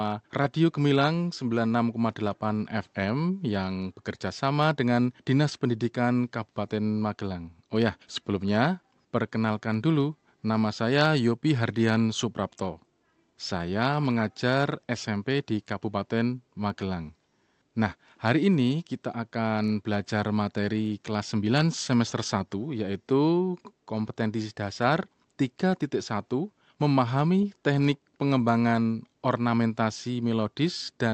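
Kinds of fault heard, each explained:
Nothing wrong turns up here; the speech simply sounds like an ordinary call, with the highs topping out at 8 kHz as you'd expect from that kind of link.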